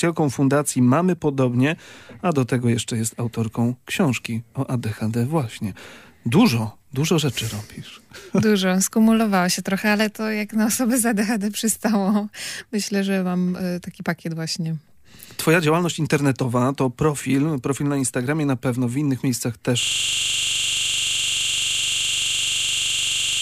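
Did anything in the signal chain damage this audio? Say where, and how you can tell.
Yes. At 19.83 s the driver or buffer stage fails with a system hang loop that runs to the end of the clip. The system froze while the audio hardware kept replaying its ring buffer, so one 42.67 ms slice repeats exactly, over eighty times, which fits a 2048-sample buffer. At 23.4 Hz it sounds like a rapid machine-gun stutter. The waveform shows identical blocks tiled end to end. The spectrogram shows evenly spaced vertical seams and frozen, unchanging content.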